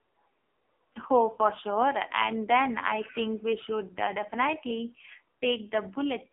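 AMR narrowband mobile codec damage runs through the whole clip: the speech sits in a 250 Hz to 3.5 kHz telephone band with nothing above 3.6 kHz, and heavy buzzy, synthetic coloration fits a low-rate mode near 5.9 kbps, where few pulses drive the vocal-tract model.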